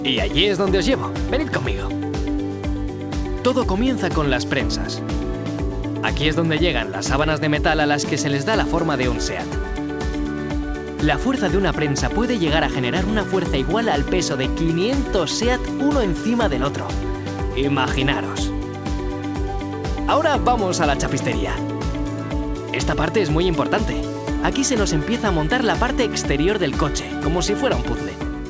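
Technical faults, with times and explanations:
No faults found; the audio has passed through a call path whose band stops at 8 kHz, consistent with G.722 wideband coding at 64 kbps.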